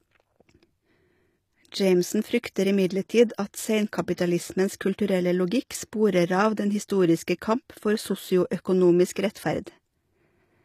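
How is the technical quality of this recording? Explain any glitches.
The recording has clearly audible codec damage throughout and one pre-echo on a transient.

Throughout, the speech treble sounds synthetic and gritty, with nothing above 14.9 kHz. This is likely HE-AAC compression rebuilding treble from copied lower bands, consistent with a low bitrate around 24 kbps.

From 4.13 to 4.18 s, pre-echo appears: block-spread quantisation noise fills the 46 ms before a sharp attack, heard as a brief hiss and a smeared onset.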